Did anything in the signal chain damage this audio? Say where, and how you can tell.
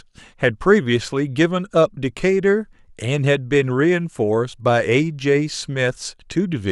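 No, nothing along the signal chain has left an audible mark on this speech recording; the signal is intact at every stage.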